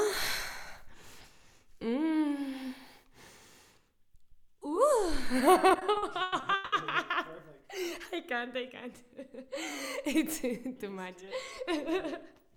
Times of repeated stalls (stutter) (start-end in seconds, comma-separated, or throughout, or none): 5.69-6.74